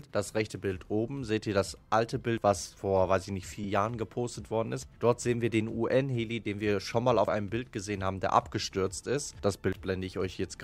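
Lost LE Audio frames at 1.67 s: a 7.5 ms gap, which fits one LC3 frame, was filled by replaying the last spectrum with random signs, giving a brief noisy smear.

Audio missing between chunks at 2.38 s: roughly a twentieth of a second drops out and the two sides butt straight together, likely lost while one 2.5 s processing chunk closed and the next opened.

Lost LE Audio frames at 3.64 s: another 7.5 ms smear.

Audio missing between chunks at 4.83 s: the same skip recurs 2.5 s after the first.

Lost LE Audio frames at 6.44 s: 15 ms long, pointing to two consecutive frames, so the noisy patch is slightly longer.

Audio missing between chunks at 7.28 s: the skips keep their 2.5 s rhythm.

Lost LE Audio frames at 9.30 s: a single 7.5 ms smear.

Audio missing between chunks at 9.73 s: the last skip in the regular series.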